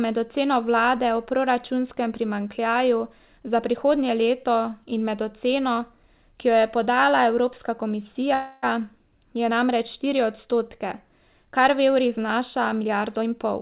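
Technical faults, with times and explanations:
8.34–8.65 s, call audio freeze: the audio stalls for about 0.3 s, and the last sound is stretched into a fading buzz or hiss rather than silence, likely because packets were held up and the jitter buffer ran empty. Nothing is lost; the sound resumes where it stopped, now 285 ms later. On a spectrogram, a smeared, repeating band that decays; the waveform shows no flat gap.
12.81–13.57 s, jitter buffer speed-up: just after "kar v evrih znaša" the speech turns hurried, running at about 124% speed with unchanged pitch, as the receiver drained surplus buffered audio by cutting short pitch-period pieces, roughly 200 ms in all. The waveform shows periods of unchanged length with some removed; spectrogram harmonics stay level while syllables crowd together.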